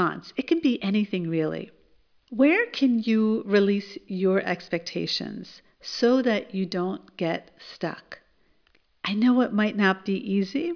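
No audible technical faults here.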